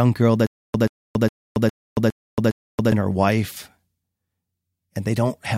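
From 0.47 to 2.92 s, a 133 ms fragment of speech repeats six times, each followed by 276 ms of dead silence on a steady 409 ms cycle. This is a stutter with silent gaps. The likely cause is a stalled stream replaying its last fragment at each retry, and the speech from that span is lost.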